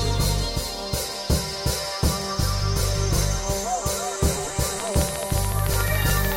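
From 4.8 s to 6.33 s, a train of clicks rides over the music: about twenty sharp, near-identically shaped ticks, evenly spaced at 13.8 per second and standing roughly 10 dB above the music. The likely cause is electrical interference from nearby equipment or a faulty connection or power supply injecting repeated pulses. Unlike random crackle, these clicks keep one shape and a steady pace. At this rate they stay distinct as ticking rather than fusing into a buzz.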